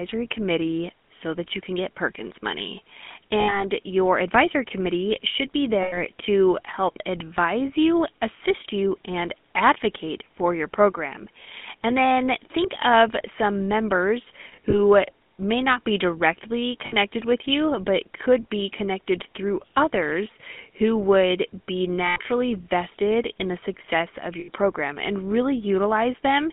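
Throughout the speech, the GSM full-rate codec leaves a buzzy, gravelly roughness. The pulse-driven excitation rebuilds the voice crudely, and the line passes only 200 Hz to 3.5 kHz. A spectrogram shows a hard ceiling near 3.5 kHz and smeared, grainy harmonics.

Lost GSM frames occur at 3.4–3.64 s before "your advisory committee should", 5.82–5.98 s, 14.48–14.79 s, 16.86–16.95 s between "may not be directly" and "with you but could", 22.06–22.18 s, and 24.4–24.49 s between "in the success of" and "program and". Each gap is filled by repeating the last good frame, giving a brief metallic ring. On a spectrogram, frozen horizontal bands replace normal formant movement.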